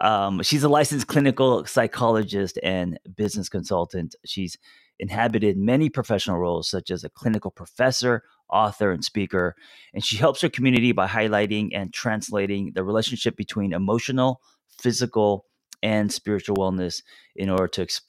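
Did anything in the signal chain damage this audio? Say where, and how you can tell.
Yes, the damage happened at the driver and buffer stage. Periodic USB or driver dropouts run from 0.18 s to 17.58 s as a train of about twenty ticks, one every 1.024 s. Each is a gap of roughly half a millisecond that drops to silence, so the waveform briefly goes flat and back. The rigid spacing points to a background task that stalls the USB bus or audio driver on a fixed timer.

At 10.77 s there is a small forward jump in the speech, a loss of a few milliseconds with no silence, where the two sides of the missing piece butt together. This is likely a dropped buffer (overrun): the application fell behind and the hardware overwrote that block before it was read, so the stream resumes further along rather than pausing.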